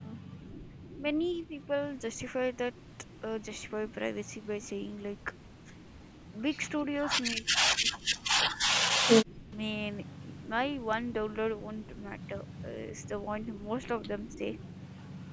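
The speech dips at 0.00 to 0.19 s, 0.37 to 0.42 s, 0.95 to 1.06 s, 1.45 to 1.70 s, 7.35 to 9.52 s and 14.34 to 14.41 s. The drops range from slight to about 40 dB, deepest in the two-second stretch. This is likely speech suppressed in double talk, where the echo canceller mistook overlapping talk for echo and turned it down.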